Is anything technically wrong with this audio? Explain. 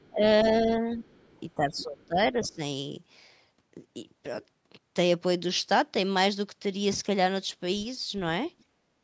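Yes. Three echo-related faults are audible.

Other side's voice leaking through occurs at 0.0–0.5, 1.03–1.4, 1.77–2.06, 2.43–2.55 and 8.59–8.64 s. A second voice sits under the speech, roughly 20 to 40 dB down. The likely cause is loudspeaker echo that the canceller left in the microphone signal.

Speech suppressed in double talk runs from 0.1 to 1.04 s and from 1.56 to 2.6 s. During these spans, the main talker repeatedly dips by up to roughly 15 dB, for about half a second and then most of a second in total. This likely happens because the canceller confused overlapping talk with echo and turned everything down.

Background gated by the echo canceller appears at 8.64–8.95 s, right after the last echo scrap. The room sound drops by about 14 dB for roughly 0.3 s and then returns. The canceller clamped the microphone hard while the loudspeaker played, then released it.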